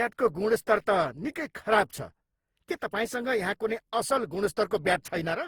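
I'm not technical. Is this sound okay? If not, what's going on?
No. The speech sounds swirly, hollow and smeared throughout, with the starts of sounds blurred. That points to generation loss: the audio was likely squeezed and unpacked about seven times, each pass adding damage, so it sounds worse than a single rough compression would.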